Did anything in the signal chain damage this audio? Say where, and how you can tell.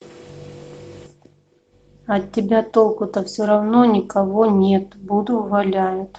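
No, nothing in the signal chain damaged this speech.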